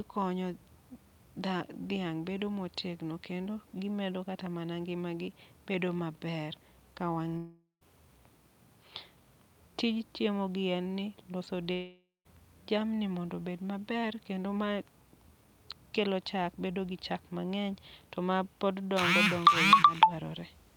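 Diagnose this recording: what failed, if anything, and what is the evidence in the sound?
Long network dropout at 7.37–7.83 s and 11.73–12.27 s: each time, the speech turns into a fading buzz, drops to near silence, then resumes with about 0.44 s and 0.52 s missing. Network packets likely stopped arriving, and the receiver's concealment stretched the last sound before giving up.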